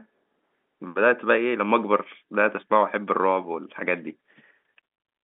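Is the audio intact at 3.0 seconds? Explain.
Yes, the audio is intact at 3.0 seconds, with no fault at that moment and only the narrow telephone band of G.711 telephone coding to be heard there.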